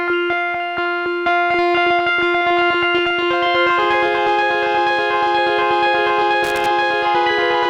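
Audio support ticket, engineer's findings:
Irregular burst of crackle and scratching, 6.44 to 6.66 s, about 0.22 s long. Loose connector crackle, probable worn or dirty cable contact or jack. Contact making and breaking rapidly as it shifts, chopping the signal on and off. Any DC on the line turns each break into a pop.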